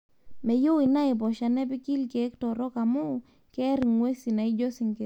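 At 0.86 to 0.88 s, a single loud pop cuts across the speech, rising a few decibels above it. A stronger one follows at 3.83 to 3.85 s, roughly 10 dB over the signal. Each is a brief electrical pulse, likely from a plug, switch or static discharge, added on top of the audio. Unlike a dropout or a digital click, the speech carries on unbroken beneath each thump, with no gap or skip.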